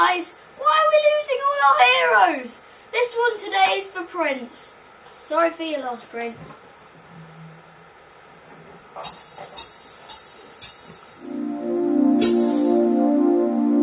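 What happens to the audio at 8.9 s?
Nothing goes wrong at 8.9 s, and the audio plays through that moment intact.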